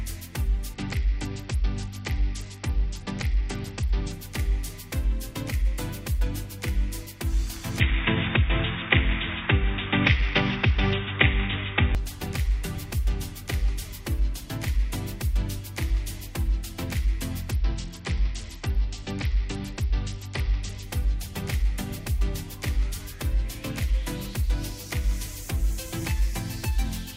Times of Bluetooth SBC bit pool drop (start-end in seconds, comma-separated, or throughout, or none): 0.73-4.13, 10.07-10.93, 17.51-20.83